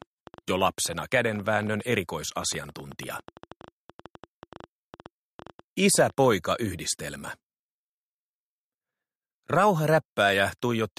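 From 0.02 s to 6.33 s a train of clicks runs over the sound, about 8 per second on an uneven pace, some fifty in all. Each click has much the same sharp shape and peaks at roughly the level of the signal itself, so the ticking is heard throughout, including in quieter gaps. The pulses stop abruptly at 6.33 s. The cause is likely interference from nearby equipment or a faulty connection or power supply.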